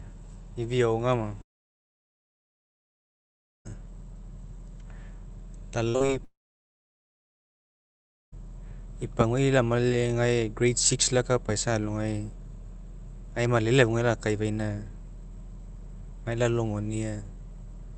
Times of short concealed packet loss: 5.96-6.10

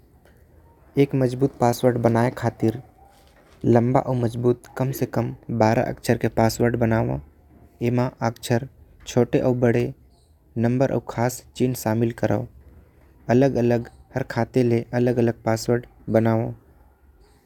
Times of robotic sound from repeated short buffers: none

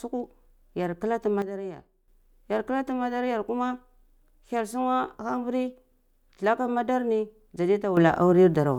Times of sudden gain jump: 1.42-2.08, 7.97-8.78

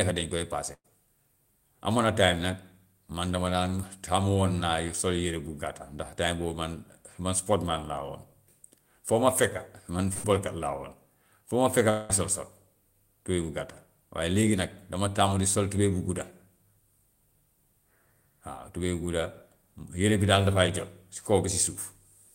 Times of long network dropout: 11.90-12.11

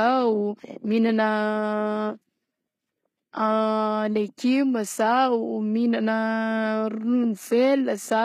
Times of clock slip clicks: none

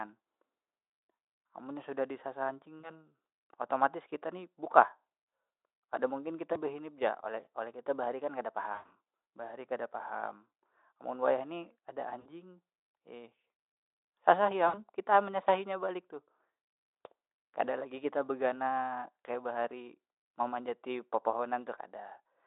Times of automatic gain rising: none

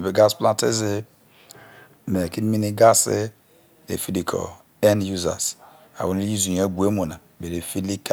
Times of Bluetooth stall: none

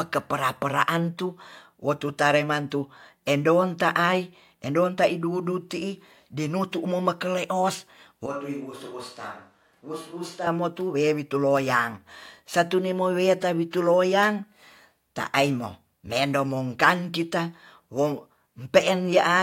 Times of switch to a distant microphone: 8.26-10.47

